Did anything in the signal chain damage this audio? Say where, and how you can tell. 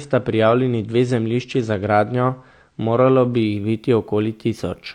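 Yes. The damage sits at the codec and playback stage: an adaptive stream starting at a low bitrate. From the start of the speech to 3.45 s there is nothing above 9 kHz, so sibilants sound dull and codec smearing is stronger. At 3.45 s the treble returns abruptly and artefacts ease, with no gap in the audio. This fits a player that began on a low-bitrate rendition, around 32 kbit/s AAC, then switched to roughly 96 kbit/s once it had measured throughput.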